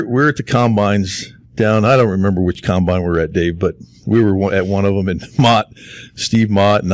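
No technical faults can be heard anywhere in this recording.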